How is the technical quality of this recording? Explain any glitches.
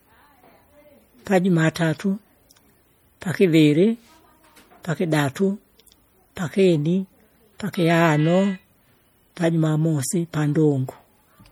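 Plainly audible codec damage runs throughout the speech. Likely MP3 compression at a low bitrate, around 48 kbps, starves weak frequency lines, so they flicker between frames and sound watery and swirly throughout.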